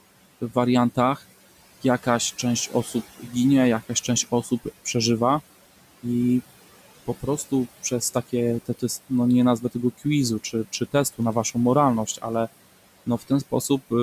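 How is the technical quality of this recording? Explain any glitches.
The recording is marred by noise suppression that works too hard: the background is pumped down, and in four places the speech itself is dragged down with it.

Noise suppressor artifacts run through the whole clip. The suppressor estimates the steady room noise, which sits about 19 dB below the speech, and cuts the bands it judges to be noise by about 16 dB, frame by frame. The background noise falls away in pauses and rises again under speech. Unlike plain room noise, it changes with the speech.

Speech cut by the noise suppressor happens at 2.67–3.33 s, just after "jakaś część", at 3.89–4.95 s, across 7.07–12.24 s, and at 13.06–13.91 s. Here the suppressor took parts of the speech for noise and lowered them by about 13, 18, 15 and 14 dB at the deepest points respectively. Only short stretches are hit, from about a tenth of a second up to roughly half a second in the long middle span. 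The affected parts of the speech sound swallowed or faint. Unlike a dropout, the sound fades rather than vanishing abruptly.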